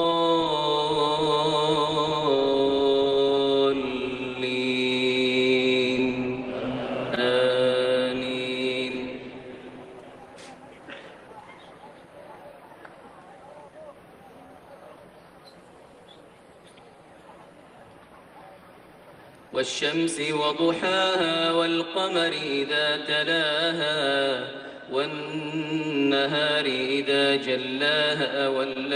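Clock drift between sender and receiver runs through the whole clip. The sender's clock runs about 1% slow relative to the receiver's. The jitter buffer therefore keeps draining. The receiver must stretch the sound it has to stay in step. That mismatch is constant, so small timing hiccups recur from start to finish at uneven intervals.

Repeated timing corrections follow from it, from 0.14 s to 27.73 s. Playback runs at 99% speed across that stretch. The receiver repeats short pieces again and again, all in the same direction. Together they add roughly 0.3 s. Each edit is small. If heard at all, they come across as brief stutters or an unsteady tempo, spaced unevenly.

Scattered short gaps appear from 1.24 s to 8.76 s. There are about five of them. Packets went missing or arrived late, one at a time. The receiver covered each hole by continuing the last sound. About 50 ms is patched in all. 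The longest gap is roughly 15 ms, so these come across as ticks or tiny smears.

More scattered short gaps follow from 24.63 s to 28.77 s. There are about three here, covering roughly 40 ms together. The longest runs about 20 ms. Each is again filled by extending the preceding sound. They register as brief smears. Between them the audio is mostly clear.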